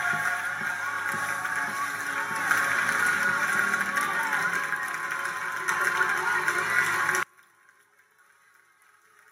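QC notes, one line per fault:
7.23–9.31 s, one channel inverted: the mono sum drops by about 31 dB to a faint residue, likely from one channel's reversed polarity cancelling the shared content.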